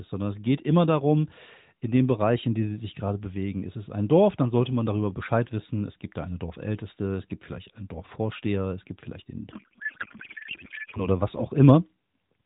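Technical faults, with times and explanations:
9.52 to 11.08 s, codec payload misread: right after "es gibt vielleicht den", the receiver unpacks the AMR-NB frames with fields misplaced, which fits octet-aligned frames read as bandwidth-efficient, so valid-looking bits decode as garbled noise and warble barely tracking the speech until the packing matches again.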